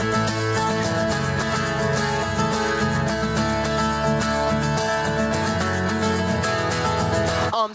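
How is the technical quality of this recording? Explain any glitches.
Nothing here sounds like a glitch; it comes across as a normal call recording, with the top end stopping at about 8 kHz, which fits a wideband call codec, and nothing going wrong along the way.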